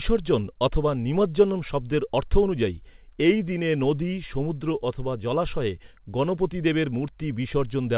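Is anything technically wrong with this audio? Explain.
No, nothing technically wrong here.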